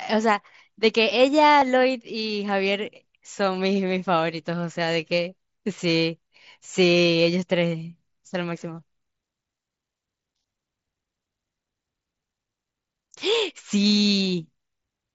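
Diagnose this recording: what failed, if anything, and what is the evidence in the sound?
Two brief smears in the speech, at 1.6 s and 13.72 s, where the sound briefly repeats itself instead of dropping out. This is concealed Bluetooth headset packet loss on the wireless link: about 15 ms, then 7.5 ms of mSBC audio went missing, and the receiver patched each gap with a copy of the best-matching recent waveform.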